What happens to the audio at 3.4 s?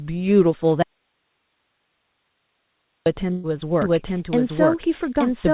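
A burst of packet loss hits between 3.32 and 3.47 s. Several packets in a row never arrived in time to be played. The receiver filled the hole by stretching the last sound it had for about 116 ms and fading it down. There is no silence, just a smeared, dimming tail. When the audio picks up again, about 120 ms of speech has been skipped. The call audio around it stays narrowband, with nothing above 4 kHz.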